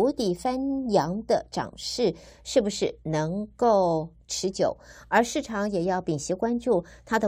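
No technical faults can be heard anywhere in the recording: the signal keeps a steady level, stays continuous throughout, and shows no audible disturbance to the speech.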